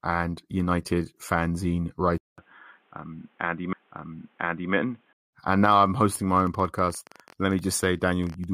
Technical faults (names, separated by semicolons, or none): input switched to a poorer device; stream segment repeated; train of clicks